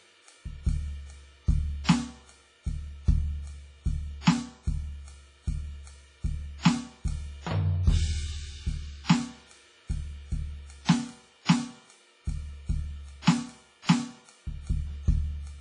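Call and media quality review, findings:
WMA compression, throughout the music: washy, ringing top end with hiss that rises and falls with the signal; nothing above 10.4 kHz. Likely a WMA transform encoder at a low bitrate, which fits around 24 kbps. Heavy damage: long blocks smear quantisation noise across tens of milliseconds, weak spectral lines zeroed, upper band discarded entirely. Component: encoder stage, bitrate too low for music.

Pre-echo at 1.84 s, 4.21 s, 10.85 s, 11.45 s, 13.22 s: brief hiss ahead of sharp attacks, attacks softened and smeared. Spread 46 ms, 58 ms, 38 ms, 36 ms, 53 ms respectively. Mechanism: attack lands late in a transform block; noise sized for the loud transient fills the quiet lead-in. Same encoder, no short-block switching on transients.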